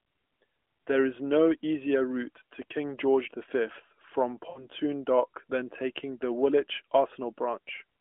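At 4.50 s the speech hits lost AMR speech frames, lasting until 4.67 s. About 60 ms of coded speech went missing, which fits three consecutive 20 ms frames, so the decoder filled the gap by repeating its last good pitch and vocal tract settings at decreasing gain. The sound stretches into a smeared, sustained tone that sinks toward silence, and speech returns thin and rough for a moment, within the narrowband telephone character of the line.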